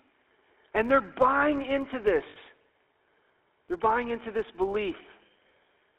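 From start to finish the speech carries the gravelly, buzzy roughness of the GSM full-rate codec. The band is held to roughly 300 Hz to 3.5 kHz. The coder rebuilds the voice from a vocal-tract model and a sparse pulse excitation. The damage is plainly audible, which fits 13 kbps GSM.

A second fault also runs throughout. It is a filter restarted on every block. The filter loses its memory and starts each block from silence. Each restart leaves a small click. Those clicks repeat at 86.1 Hz, giving a steady buzz that rises and falls with the speech. That rate points to a 512-sample block.

At 2.3 s, just after "and they're buying into", lost GSM frames take over until 2.37 s. For 60 ms the decoder keeps reusing the last good frame. The sound hangs as a rough, metallic ring. This fits three lost frames.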